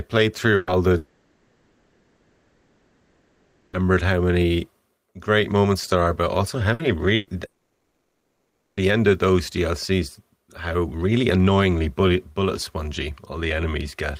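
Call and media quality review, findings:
Burst of packet loss, three hits:
0.55–0.70 s: ~120 ms gap, concealment continues the last sound and fades it, then skips ahead.
6.73–6.82 s, right after "are but also how": shorter, ~60 ms, same smeared fill.
7.15–7.30 s: ~120 ms, packet-loss concealment papers over it, and the audio between is gone.

Long network dropout, two hits:
0.97–3.76 s: ~2.8 s lost before "how many great moments". The concealed tail fades into low steady noise, never true silence, and the speech resumes with that whole stretch missing.
7.45–8.80 s: ~1.3 s, same pattern, comes back at "end of those". Likely an upstream link outage, with the receiver filling until packets return.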